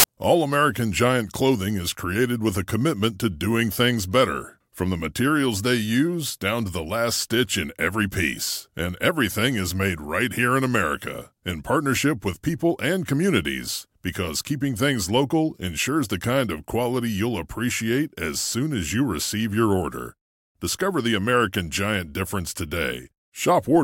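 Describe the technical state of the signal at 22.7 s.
No fault is present at 22.7 s, and the signal is intact at that point.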